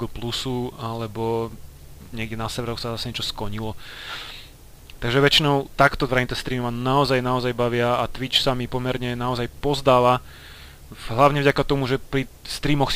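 No technical faults can be heard anywhere in this clip.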